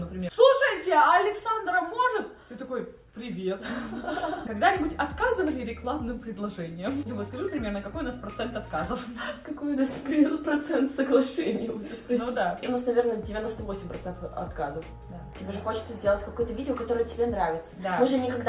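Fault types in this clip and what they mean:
No technical faults can be heard anywhere in the clip.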